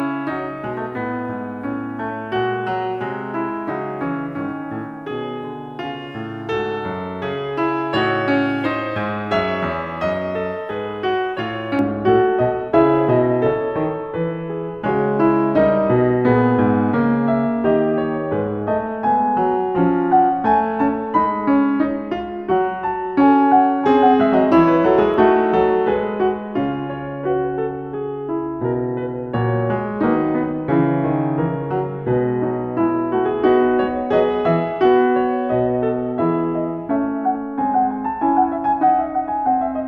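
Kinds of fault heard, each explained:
Pre-emphasis left on: a J.17-style treble boost was never reversed by its matching cut, so from 0.0 to 11.79 s the music sounds thin and bright, about 11 dB stronger at 10 kHz relative to 1 kHz; a spectrogram shows the upper band glowing brighter until then.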